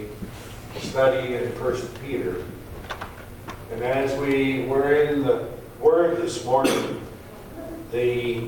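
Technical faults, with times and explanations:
There are no technical faults to give times and explanations for.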